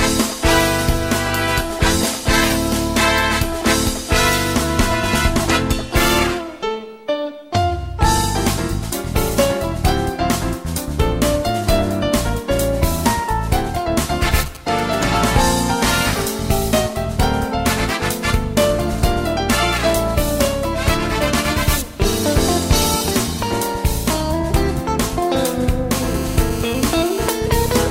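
From 14.31 to 15.42 s, a 2G handset close to the recording chain was exchanging brief signalling bursts with its network, and the audio circuitry rectified that radio energy into the signal path. The result is GSM signalling bursts: a galloping dit-dit-dit of short buzzes pulsing at 216.7 Hz, sitting roughly 15 dB below the programme sound and having no musical or acoustic relation to it.

From 25.92 to 27.30 s the same kind of interference returns as a GSM phone buzz, this time from a handset transmitting in regular bursts as it does during a call. Its radio pulses, repeating 216.7 times a second, were again demodulated by the audio electronics. The result is a steady, hard, raspy buzz at that rate, rich in harmonics, about 16 dB under the wanted audio and unrelated to it.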